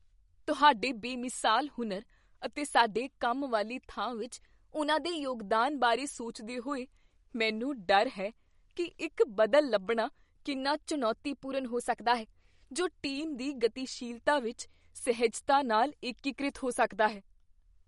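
Speech, with a watery, swirly texture throughout, smeared consonant onsets and nothing above 11.2 kHz; that plainly audible damage is likely MP3 compression, with weak frequency lines dropping in and out between frames, which fits a low bitrate near 48 kbps. Twice the voice suddenly runs 5.83% fast and rises about 98 cents, close to a semitone, then snaps back: from 4.22 to 5.42 s, after "ਸਾਡੇ ਕੰਮ ਵਾਲੀ ਥਾਂ" and before "ਬਾਰੇ ਸੋਚਦੇ ਹੋਏ ਮੈਨੂੰ", and from 10.56 to 12.98 s, ending before "ਟੀਮ ਦੀ ਗਤੀਸ਼ੀਲਤਾ ਵਿੱਚ". These are likely drift correction steps, where clock-matching software abruptly changed the playback rate to rebalance its buffer.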